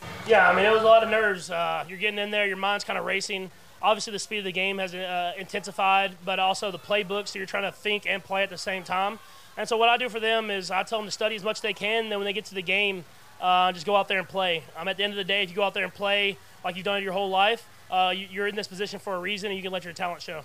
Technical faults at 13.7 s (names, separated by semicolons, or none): low bit depth without dither